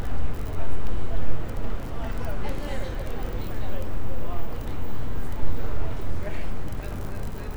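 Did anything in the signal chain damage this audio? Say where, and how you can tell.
No, nothing in the chain audibly damaged these sounds.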